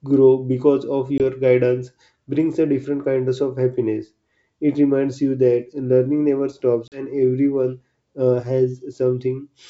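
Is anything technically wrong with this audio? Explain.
Yes. There is packet loss on an ADPCM call at 1.18 s (a 20 ms gap, fitting a single lost packet) and at 6.88 to 7.04 s (about 40 ms lost, roughly two packets). Each lost stretch becomes silence, which shows as a flat waveform and a vertical blank band on the spectrogram. The decoder's predictor and step size then no longer match the sender's, so speech resumes slightly distorted before settling. The wideband G.722 coding carries clear speech up to about 7 kHz, with faint or no codec damage.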